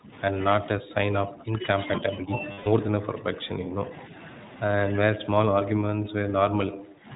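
Narrowband coding with the iLBC codec throughout cuts everything above 4 kHz. Its 20 ms frame structure, which fits the 15.2 kbps mode, leaves the speech plainly rough and slightly synthetic.

From 0.0 to 0.13 s, 0.77 to 1.61 s and 1.99 to 2.41 s, an echo canceller likely mistook overlapping talk for echo, so speech suppressed in double talk dips by up to about 15 dB, loses its top end and breaks into fragments.

From 2.52 to 2.68 s, lost iLBC frames force the decoder to repeat the last pitch cycle for 140 ms, which points to several consecutive 20 ms frames. The result is a held, buzzy vowel, and speech returns immediately afterwards.

The same double-talk suppression returns from 2.99 to 3.82 s, with dips of about 10 dB. From 5.15 to 7.07 s the speech again sinks by up to about 15 dB and thins out in pieces.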